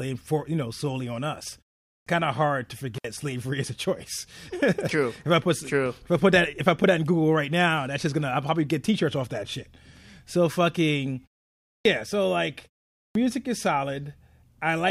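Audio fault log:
1.90 s, 11.69 s, 12.99 s: clipped start after a pause. Each time the output wakes late after a short gap, swallowing about 160 ms, so sound bursts in abruptly.
2.96 to 3.04 s: intermittent contact. A loose connection opens for roughly 60 ms, dropping the sound to faint hiss with a crackle at each edge.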